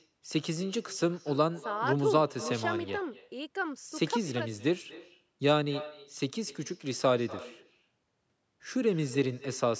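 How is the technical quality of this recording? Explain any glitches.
The recording has one real problem, and it runs the whole way through: an echo with no canceller. At the far end the call is coming out of a loudspeaker, that microphone picks it up again, and nothing strips it out, so the speech returns after a round trip of around a fifth of a second. Each phrase is trailed by a copy about 18 dB down, and thin. The band stopping near 8 kHz is just the call microphone processing.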